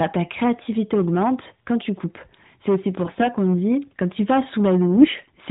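Speech heard over a narrowband mobile path, with nothing above 4 kHz and the light synthetic edge that fits AMR-NB at its 12.2 kbps mode, carries hard clipping from start to finish. The level was driven about 11 dB past what a stage could pass, so a small share of samples on the loudest moments are cut flat, and those flat tops add a crackly fuzz on every peak. It differs from codec buzz because it tracks loudness and rides on the peaks rather than colouring the whole band. Two short bursts of AMR bit errors also occur, from 3.05 to 3.29 s and from 4.95 to 5.26 s. During these bursts, a few percent of the less protected bits in each frame arrived flipped while the frames were still accepted. The excitation pulses and the fine gain and spectrum values went astray, so the voice keeps roughly its pitch and level but turns hoarse and gargly. Frame loss would instead produce gaps or smeared repeats.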